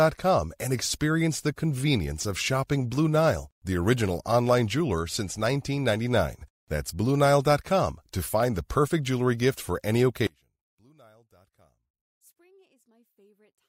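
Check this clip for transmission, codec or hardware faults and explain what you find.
One fault stands out, from 10.27 s to the end of the clip. The likely cause is one channel inverted: one side of the stereo pair has flipped polarity, so when the two channels are combined to mono, everything they share cancels. Here the speech drops by about 34 dB and nearly vanishes, leaving only a faint residue made of the small differences between the channels rather than the full signal.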